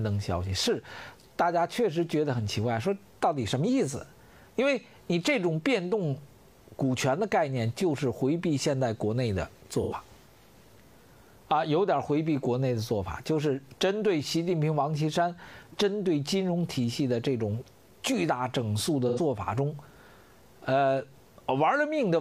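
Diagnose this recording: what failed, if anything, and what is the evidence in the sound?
Codec stage: AAC frame loss with concealment, twice, at 9.82–9.93 s and 19.08–19.19 s. Each gap runs 85 ms, which fits two dropped frames. The decoder fills it from the last good spectrum, so you get a brief smeared, noisy patch instead of silence.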